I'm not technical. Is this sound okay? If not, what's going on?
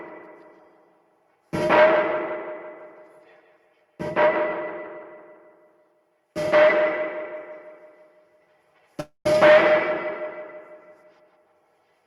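No, there's a call audio freeze from 9.00 to 9.34 s. The last bit of sound stretches into a fading buzz, then briefly goes quiet, and the audio picks up where it left off. Nothing is lost; it's likely delayed network packets pausing playback.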